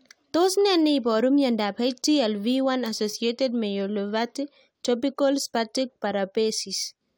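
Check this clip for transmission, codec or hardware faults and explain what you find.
No faults found in this clip.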